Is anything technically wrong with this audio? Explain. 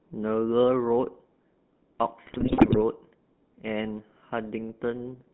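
Yes, two faults. Throughout, the GSM full-rate codec models the voice with a pulse-driven vocal-tract filter, giving buzzy, gravelly speech; a spectrogram shows energy confined to roughly 150 Hz to 3.5 kHz. From 2.26 to 2.79 s, GSM bit errors corrupt the decoder's filter, pitch and gain values, producing squawks, pops and gargling, visible as smeared spectral bands and sudden waveform level spikes.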